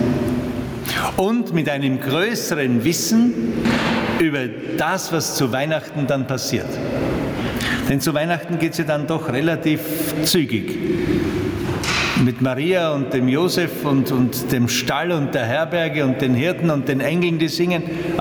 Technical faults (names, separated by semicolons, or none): gain pumping